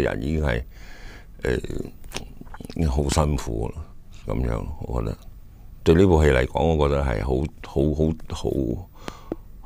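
A sharp loud pop cuts through the audio at 3.12 to 3.14 s, and a pair of pops follows at 9.08 to 9.34 s, each peaking roughly 15 dB above the surrounding sound, which carries on underneath. The likely cause is a voltage spike from a plug, switch, static or driver glitch.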